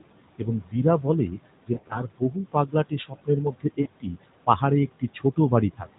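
A speech recording over a narrowband mobile link, where the background noise keeps sinking between phrases and swelling under the voice. These are noise suppressor artifacts: the suppressor pulls the steady room noise down by about 21 dB frame by frame, so the noise gates in and out with the speech. From 0.38 to 4.62 s, and again from 5.0 s to the end, soft consonants and quiet word tails sound swallowed, about a second in all in the first span and a shorter stretch in the last. This is speech cut by the noise suppressor, which mistook those low-level parts for noise and dropped them by up to about 22 dB. Between 1.74 and 2.02 s the voice briefly smears and dips several times, with the longest dropout about 40 ms, and at 3.82 to 3.88 s there is one more short warbling fade. These are lost AMR speech frames: about 100 ms was missing in the first stretch and 40 ms in the second, which fits five bad 20 ms frames the first time and two the second. 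Each time, the decoder repeated the last good pitch and vocal-tract settings at falling gain before the real signal resumed.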